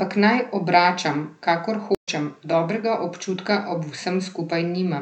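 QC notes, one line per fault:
1.95–2.09 s, stream reconnect: after "naj obračam kakor" the speech drops out for 110 ms, then resumes at "dobrega občutka" about 150 ms further on. The connection broke and a fresh decoder restarted mid-stream, so the gap is followed by a forward skip in the audio.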